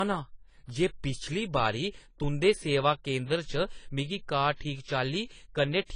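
Low-bitrate audio saved at a high bitrate, present throughout the speech. Nothing reaches above 10 kHz, so the voice lacks air and crisp sibilants, and the artefacts of the first encoding remain. This likely comes from an earlier low-rate encode, consistent with something like 24 kbit/s AAC, that was later re-encoded as a high-rate MP3 around 228 kbit/s. The larger second file cannot restore the removed detail; it simply preserves the first codec's damage.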